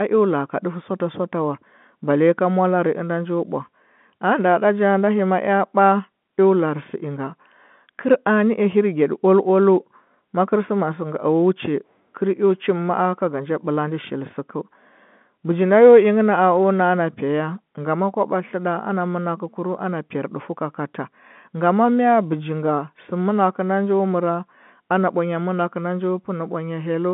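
No technical faults can be heard in this telephone-band speech.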